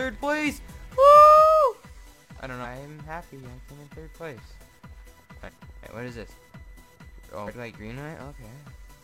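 At 2.60 s and again at 5.44 s the audio lurches forward. These are compressed frames skipped: whole frames, consistent with a 46.4 ms frame length, were never played, dropping roughly 200 ms and then about 150 ms.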